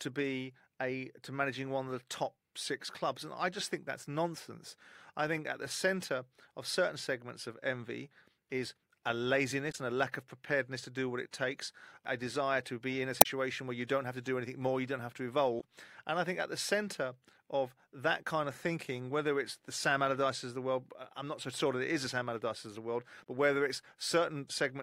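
At 9.68 s, just after "of envy is a", a brief glitch cuts in until 9.75 s, before "and a lack of". The same blip returns from 13.18 to 13.26 s, between "to be in a" and "where you don't have". It comes again from 15.57 to 15.64 s, and from 23.20 to 23.24 s, after "of the world" and before "but whether". Each is damaged data in a compressed stream. Corrupt bytes throw the decoder off its frames. It misreads them until it finds the next frame header.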